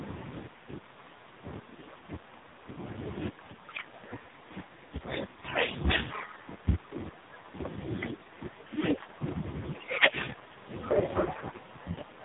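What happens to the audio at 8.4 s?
The AMR narrowband mobile codec, throughout, rebuilds speech from sparse pulses, sounding buzzy and synthetic (suggesting about 5 kbps), with a hard spectrogram ceiling at 3.8 kHz.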